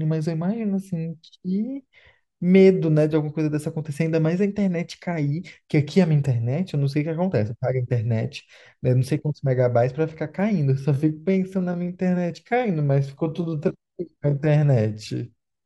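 Speech, with a time-stretched section from 10.66 s to the end of the clip at 15.66 s. The pace drops abruptly to about 0.73 times the original speed while pitch holds steady, so the slowed passage drags. This is likely a pitch-preserving stretch applied to fit a target length, where short segments of the waveform are repeated to fill the extra time.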